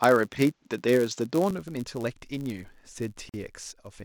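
Speech throughout carries a steady buzz at about 99.6 Hz and runs fractionally slow, at 0.996 times normal speed. This is a block size mismatch (padded): each block is written slightly short and topped up with zeros, so a tiny silence repeats at the block rate. From the start to 1.51 s the sound is duller, with a faint added noise floor and a level a few decibels different. At 1.51 s it opens up with no silence at the change, which points to a likely input switched to a poorer device, a narrower-band microphone or headset profile feeding the first part. From 3.29 to 3.34 s a 44 ms silence cuts into continuous speech with smeared edges, and the speech then resumes where it stopped. That is a gap at a join of encoded pieces, where encoder start delay and last-frame padding were left in when the pieces were joined.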